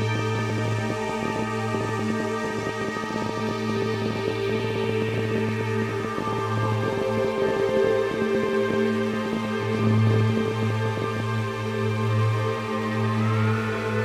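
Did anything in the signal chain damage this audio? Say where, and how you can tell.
Yes, there's a train of clicks running from 0.02 s to 11.2 s: around 150 near-identical ticks at roughly 14.1 per second, spaced unevenly, and they poke out about 10 dB above the sound itself, so they're obvious even through the quieter stretches. The identical shape and steady-but-ragged pacing point to something outside the audio injecting pulses, likely interference coupling into the analogue wiring or a faulty connection or power supply.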